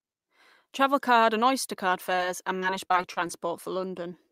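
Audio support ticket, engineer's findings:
Short concealed packet loss at 2.15–2.20 s: quick smear where about 20 ms never arrived in time. Decoder's concealment carried the previous sound forward, then crossfaded back into real audio. A tiny sound could've gone missing there.

Repeated packet loss, robotic sound, from 2.60 to 3.31 s: six dropouts, longest 28 ms, roughly a sixth of that stretch patched. Each fill extends the last sound before the next gap hits, so it goes choppy with bits missing.

Jitter buffer slow-down, 2.70–3.48 s, overlapping the loss burst: audio runs at 96% speed, same pitch, drawn-out. Receiver repeated single pitch periods and pause fragments to rebuild its reserve, adding 41 ms. Probably the buffer draining during those late packets.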